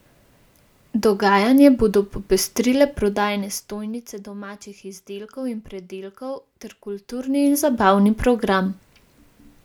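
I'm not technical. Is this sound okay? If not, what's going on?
No. From 7.04 to 7.8 s, right after "izdelkov in pridelkov ter", there is zipper noise. The speech level shifts by a large amount in small jumps, about 50 per second. Each jump clicks, so you hear a quick ticking buzz.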